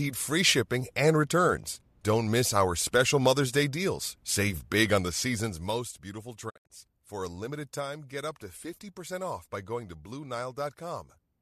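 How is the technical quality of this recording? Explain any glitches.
There is one glitch, a digital broadcast dropout from 6.49 to 6.72 s. The receiver muted when frames failed, leaving short silent holes with 20 ms fades, totalling 144 ms, longest 72 ms.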